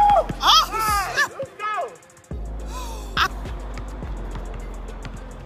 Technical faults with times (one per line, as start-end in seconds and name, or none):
none